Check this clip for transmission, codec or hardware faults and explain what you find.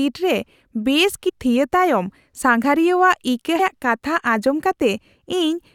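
Two compressed-frame dropouts occur. Compressed frames skipped at 1.28–1.30 s and at 3.58 s. The speech jumps ahead by roughly 0.4 s each time, which points to about twenty lost or rejected 21.3 ms frames.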